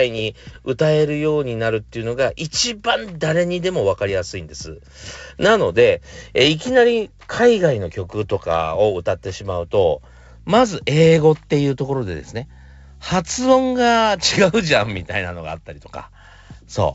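Bit errors on an ADPCM link crackle through at 0.47–0.58, 5.07–5.17 and 14.76–15.07 s; each flipped bit upsets the decoder's step size, so pops ring on briefly as rough level-jumping bursts.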